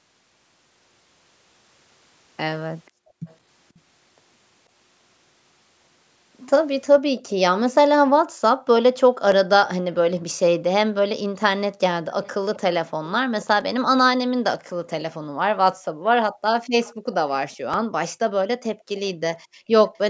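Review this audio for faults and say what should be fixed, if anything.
Echo leak: a faint delayed copy of the speech trails it by about 485 ms at 2.86–3.8, 12.23–13.46, 16.35–17.56 and 19.09–19.99 s. It is likely sound that passed from a loudspeaker into a microphone. Because it is a delayed duplicate, it differs from reverb.

Background gated by the echo canceller: the room sound drops by about 40 dB at 2.91–3.26, 8.26–8.38, 15.18–17.06 and 18.75–18.86 s.

Repeated buffer: tiny stutters at 9.32, 13.61 and 17.74 s, where a piece of about 5 ms replays with hard joins. This is a click rather than an audible gap.

To prevent these, tune the echo canceller's suppression so it removes echo without clamping the background, and enlarge the playback buffer.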